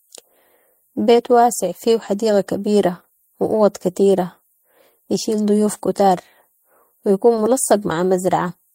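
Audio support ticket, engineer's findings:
Short concealed packet loss at 7.35–7.39 s, speech. Brief smear, about 20 ms of audio missing, filled by the receiver's concealment extrapolating prior sound, then crossfaded back. Component: jitter buffer/decoder PLC.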